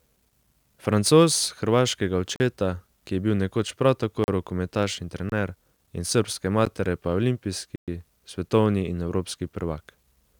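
Blocks of digital silence occur at 2.36–2.40 s, 4.24–4.28 s (between "nekoč prav" and "rokometaš in"), 5.30–5.32 s just after "rokometaš in", 6.65 s after "in srbske", and 7.76–7.88 s. Each time the speech stream drops to silence, lasting 40, 40, 25, 12 and 120 ms, likely because the output buffer was not filled in time. The cuts start and stop abruptly with no fade: the shortest sounds like a tick, the longest like a brief hole.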